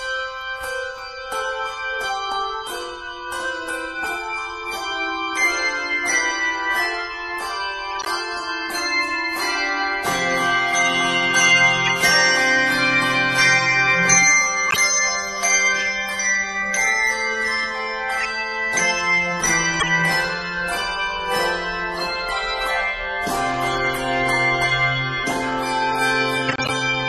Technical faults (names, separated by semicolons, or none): corrupt frame decoded